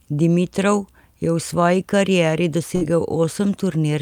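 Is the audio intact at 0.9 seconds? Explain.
Yes, at 0.9 seconds the speech is intact, with no audible fault at that moment.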